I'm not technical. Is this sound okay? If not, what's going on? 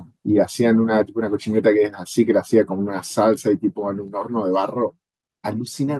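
No. At 1.02 s the speech and background suddenly get quieter, a microphone volume stepped down, likely the call software lowering a too-loud input.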